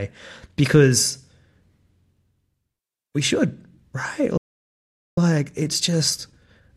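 At 4.37 s the speech stops dead in mid-flow. Silence follows for about 0.8 s, until 5.18 s. This is a playback stall. The output simply goes quiet and then resumes. The likely cause is that the player ran short of buffered data, or its audio thread was held up. No signal reaches the output during the gap. The speech does not fade out first. It just cuts off.

From 5.18 s to the end, the speech runs hurried. This is time-compressed catch-up. The pace is about 1.1 times normal, but the pitch stays where it was. The player is clearing the backlog left by the stall. It drops small slices of audio and cross-fades across the joins. The rush continues to the last moment of the clip.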